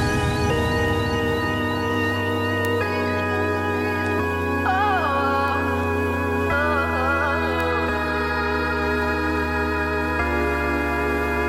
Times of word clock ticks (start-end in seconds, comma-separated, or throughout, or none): 0.18-11.49